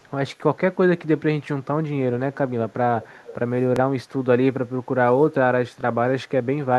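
An echo canceller on a loudspeaker end likely let some returned sound through, so faint delayed copies appear: at 0.0–0.11 s, lagging about 300 ms and very quiet; then at 2.33–2.38 s, 2.69–2.73 s and 3.0–3.35 s, lagging 350 ms and rising to about 20 dB below the speech. Later, in the Bluetooth stutter at 3.76–3.80 s and 5.81–5.84 s, the receiver replayed its last buffer for about 23 ms, which fits a single lost frame, giving a brief repeated-slice blip.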